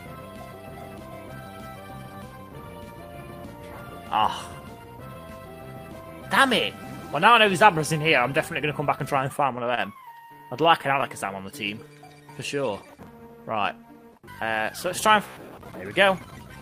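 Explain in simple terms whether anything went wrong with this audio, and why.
A few network hiccups show up in the second half.

At about 9.75 s there's a short stall from a late packet. One chunk of audio showed up late, so the player held the last bit of sound for about 25 ms until it arrived. Nothing is lost, just a tiny drawn-out moment, and the audio runs that much later from then on.

From 10.38 to 11.68 s come scattered short gaps, about seven tiny holes where pieces went missing or arrived late. Each was papered over by stretching the sound before it, none longer than roughly 15 ms, so you hear brief ticks or little smears.

Then, from 11.85 to 13.75 s, there's a jitter buffer slow-down. The player was rebuilding its safety cushion by repeating tiny slices of sound, so the audio plays at about 95% speed. It adds about a tenth of a second, dragging slightly while the pitch stays the same.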